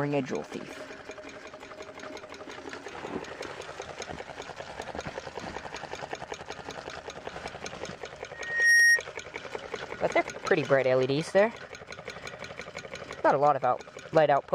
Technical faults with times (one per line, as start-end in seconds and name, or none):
8.33-9.03 loudspeaker feedback squeal